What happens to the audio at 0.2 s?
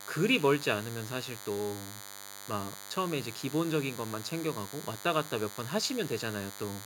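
At 0.2 s the speech already carries a DECT cordless phone buzz, and it runs through the whole clip. It is a steady, thin buzz at 100 Hz, rich in harmonics. It sits a fair way below the speech. The cause is a DECT handset or base station nearby. It sends a short radio burst every 10 ms. The audio circuit rectifies those bursts into sound.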